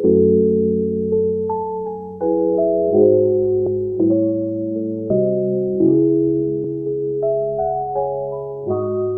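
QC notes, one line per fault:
3.66 s, 5.10 s, 6.64 s: compressed frames skipped. Each time the audio leaps ahead by about one frame, roughly 30 ms, which fits a 26.1 ms frame length. Unlike a dropout there is no silent gap, and overlapping frames turn the join into a brief smeared blip, not a hard click.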